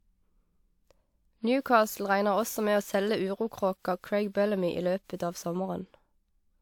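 Throughout the speech there is generation loss: a swirly, hollow smear, likely from about five lossy re-encodes, consistent with WMA near 128 kbit/s, each requantising on a shifted frame grid. Consonant attacks blur, and a spectrogram shows nothing above 19.4 kHz.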